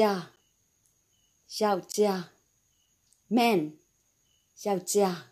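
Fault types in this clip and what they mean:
Block of digital silence: the output drops out and returns with no fade. Here a 10 ms gap at 0.36 s is heard mainly as a tick, and a 20 ms gap from 1.92 to 1.94 s is long enough to hear as a brief hole in the sound. Unlike a single-sample click or impulse, there is a true absence between two edges. Unlike a faded dropout, the cuts are abrupt.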